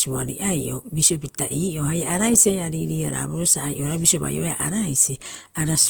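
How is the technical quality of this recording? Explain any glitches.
The recording has one clear problem: audible compression damage across the whole clip, with no single glitch standing out.

Opus compression runs from start to finish. The speech sounds grainy and rough rather than swirly, with a noisy hash over the voiced sounds. The likely cause is Opus music-mode (CELT) coding at a low bitrate, which fits roughly 24 kbps. When bits run short, the encoder keeps each band's energy but fills it with folded or noise-like content. Bandwidth stays full, reaching about 20.1 kHz. On a spectrogram the upper bands look speckled and smeared instead of showing clean harmonics.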